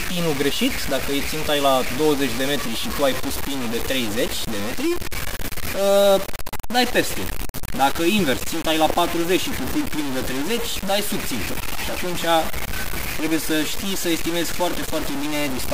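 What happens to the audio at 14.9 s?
At 14.9 s the audio is coarse and grainy, as it is throughout, with quiet parts sputtering or dropping out. The likely cause is low bit depth without dither, about 4 bits truncated, leaving error nearly as loud as the signal. Spectrograms show broadband, signal-following hash; waveforms show visible stair-steps.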